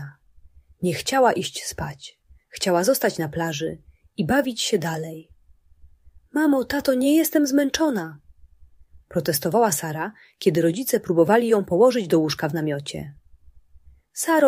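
Nothing here calls for comment, as no technical faults turn up anywhere in the clip.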